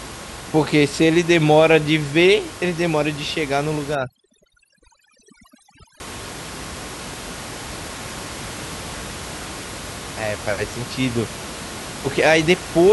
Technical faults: overdone noise removal

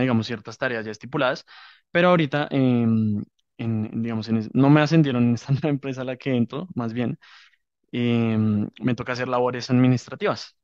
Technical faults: none

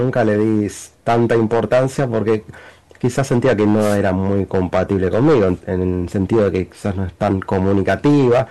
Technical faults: hard clipping; wireless microphone noise hit

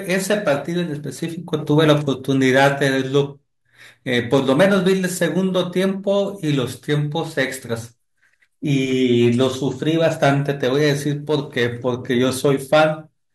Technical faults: none

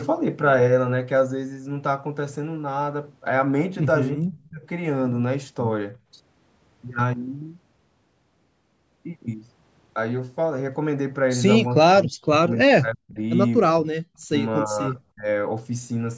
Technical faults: speech suppressed in double talk

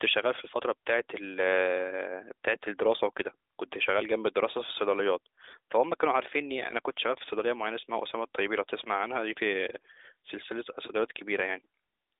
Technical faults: none

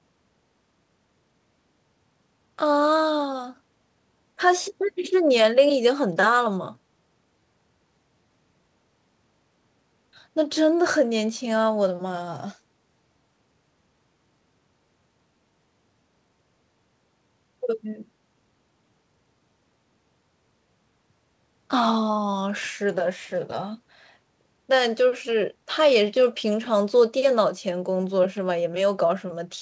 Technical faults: none

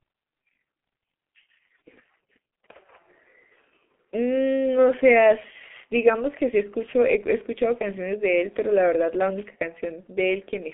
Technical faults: G.723.1 codec; wireless microphone noise hit

